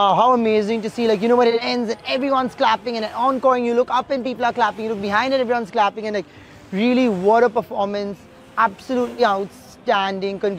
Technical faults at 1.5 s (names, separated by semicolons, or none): AAC frame loss with concealment